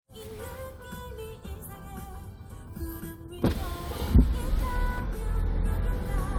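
Nothing technical stands out in this recording of sounds; there's no fault here to point at.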